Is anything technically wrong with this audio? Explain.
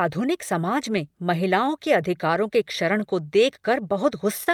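Yes, there are two faults.

Clock drift between sender and receiver runs through the whole speech clip. The sender's clock runs roughly one and a half percent slow. The receiver's jitter buffer keeps draining, so it repeats short pieces to stay fed. Small timing hiccups recur at uneven intervals.

A short stall from a late packet occurs from 4.44 to 4.48 s. A packet arrived late and the buffer ran dry. The receiver stretched the last sound for about 28 ms, then resumed where it left off. Nothing is lost, but one sound is held too long.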